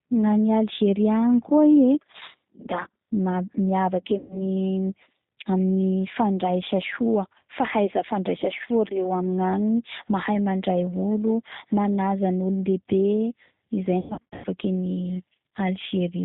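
G.729 codec damage runs through the whole speech clip and is plainly audible. The band stops at 4 kHz, and the speech is rebuilt from a vocal tract filter, a pitch predictor and a few pulses per frame, which fits G.729A at 8 kbit/s. The result sounds rough and synthetic.

VoIP packet loss concealed by the speech codec occurs at 4.18 to 4.42 s. About 120 ms of audio is missing, consistent with six lost packets. The decoder stretches its last pitch and filter into a buzzy tone or coloured noise that fades, and the speech stays weak briefly after recovery.

The same concealed packet loss returns at 14.00 to 14.47 s. Losses totalling 340 ms are scattered over 440 ms, with the longest run 100 ms. The speech repeatedly collapses into decaying extrapolation, and each gap leaves it thin and distorted as frames rebuild.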